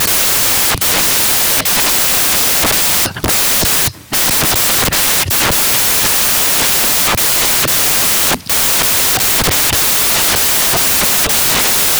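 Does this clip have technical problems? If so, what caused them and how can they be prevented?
Yes. Samples built from the wrong bytes affect the whole clip, from start to finish. The reader assembled each sample's bytes incorrectly, whether offset by one byte, in swapped order or under the wrong alignment, so the rapidly changing low-order bits ended up as the dominant part of every value. The result is loud, harsh broadband noise, close to white on the louder passages. To prevent it, make sure the decoder's byte order, sample width and alignment match the file's actual format.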